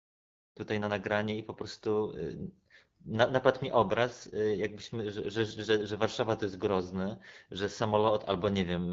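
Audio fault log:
throughout: AMR wideband (HD Voice) codec. The speech is rough and raspy, which points to AMR-WB at one of its two lowest rates, likely the 8.85 kbit/s mode. Below 6.4 kHz, too few bits drive the pulse-excited vocal tract model, giving a grainy, buzzy edge. From 6.4 to 7 kHz there is shaped noise rather than real detail. Unlike narrowband AMR, some airy top remains, and there's no MP3-style swirl or pre-echo. The fade-in ending near 0.6 s carries the same texture.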